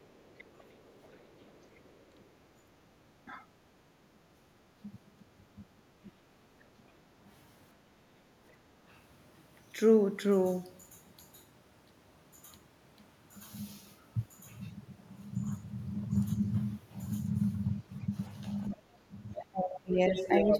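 A speech recording with three echo-canceller faults. Speech suppressed in double talk occurs from 0.0 to 6.16 s (around one and a half seconds affected in all, dips of roughly 15 dB), at 8.56 to 8.76 s, and from 18.69 to 20.53 s (drops near 20 dB). The likely cause is the canceller failing to separate the talker from loudspeaker echo while both sides spoke. On a waveform these appear as sudden notches in the envelope. A spectrogram shows the harmonics briefly fading out. The other side's voice leaking through appears from 0.26 to 2.22 s, very faint at roughly 35 dB under the talker, and again from 18.74 to 20.59 s at about the same level as the speech. This is likely residual loudspeaker echo the canceller did not remove, and it shows up as a second, overlapping set of harmonic traces. Background gated by the echo canceller appears as short dips in room tone at 2.56 to 2.71 s (about 8 dB), 4.33 to 4.54 s (about 9 dB) and 8.05 to 8.28 s (about 6 dB). 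These are brief pale gaps in the noise floor on a spectrogram.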